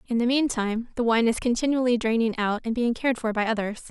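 At 0.76 s a DC step shifts the waveform's zero line by about -40 dBFS, then decays away through a 5 Hz high-pass. It is heard as a low thump, seen as an offset jump in the waveform and a brief smear at the bottom of the spectrogram.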